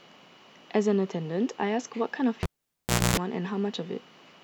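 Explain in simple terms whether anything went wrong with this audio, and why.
At 2.43 s a cable pulled and plugged in interrupts the speech. A pop cuts the sound to near silence for about 0.69 s, during which a 60 Hz mains buzz lasts about 0.26 s as the plug's tip makes contact, and sound returns by 3.17 s.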